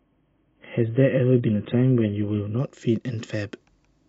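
From 0 to 2.59 s, an adaptive stream starting at a low bitrate leaves the speech dull and smeared, with nothing above 3.8 kHz. A spectrogram shows a flat ceiling that jumps upward without a gap, consistent with a step from about 16 to 96 kbit/s AAC.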